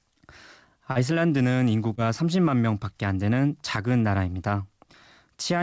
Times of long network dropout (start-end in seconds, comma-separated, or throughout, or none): none